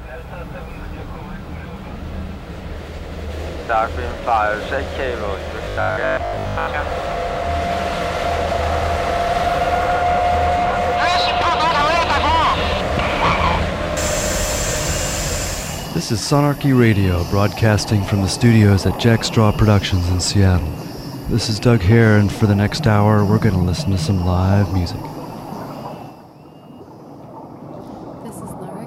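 From 5.65 to 6.67 s the sound goes robotic, a stiff, metallic 50 Hz buzz laid over it, the classic robotic sound from repeated short buffers. Most likely the audio stopped arriving fast enough, so the playback side kept looping the last chunk it had, about 20 ms long, which is exactly what pins the pitch at 50 Hz. For most of that second you're hearing repeats rather than fresh audio.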